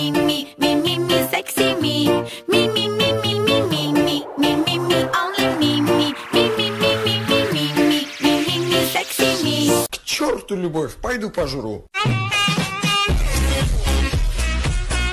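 No technical faults can be heard anywhere in the clip. The audio continues without any break or disturbance.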